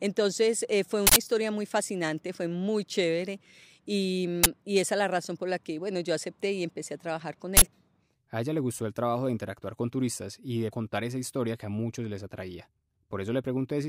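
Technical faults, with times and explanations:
1.07–1.16 s, uninitialised buffer: a harsh burst of digital noise between "eh fue" and "historia muy fascinante fue", about 93 ms long, where a block of roughly 4096 samples played out leftover memory as sound.
4.44–4.46 s, uninitialised buffer: a brief blast of digital noise just before "esa es la razón", about 23 ms long, which fits a 1024-sample block played before any audio was written into it.
7.57–7.62 s, uninitialised buffer: a loud noise burst right after "empecé a trabajar con", about 46 ms long, consistent with a 2048-sample block filled with stale memory instead of audio.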